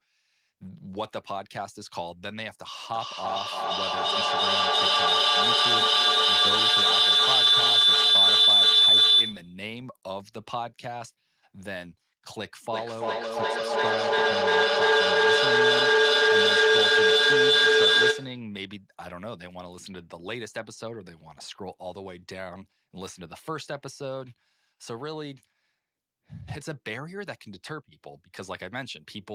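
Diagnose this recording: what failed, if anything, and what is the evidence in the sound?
Two devices in one room were on the same call, and the acoustic loop through call processing gained level on each trip, producing a feedback howl from 2.93 to 9.66 s. A tone near 4 kHz swells and pulses at about a third of a second, peaking about 15 dB above the speech.

The same loop also produces feedback echo between two devices from 12.73 to 18.54 s. Each device's echo canceller removes only its own playback, so each phrase returns about every third of a second, thinner and more ringing with each pass, and the repeats pile up to about 14 dB above the speech.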